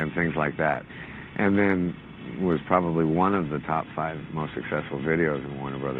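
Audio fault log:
0.74 s to end: call bitrate drop. The top end narrows from 20 kHz to 12 kHz and the texture turns coarse and watery, which fits the encoder falling from about 128 to 21 kbps. Unlike a plain low-pass, the graininess deepens, worst for about 2.5 s.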